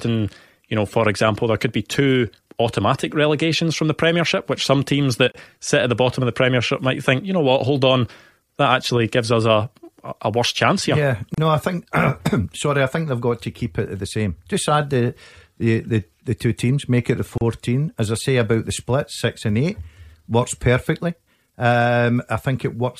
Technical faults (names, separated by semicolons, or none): gap at a join of encoded pieces